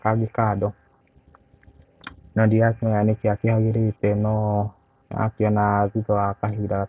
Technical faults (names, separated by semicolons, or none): none